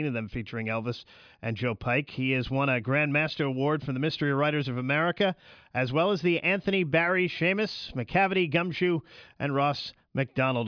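Speech recording, no audible technical faults anywhere in the clip.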